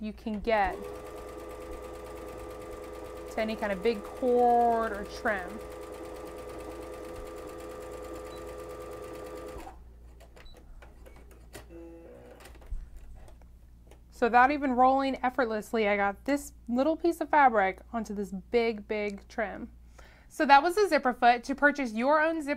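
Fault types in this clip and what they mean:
No technical faults can be heard in this audio.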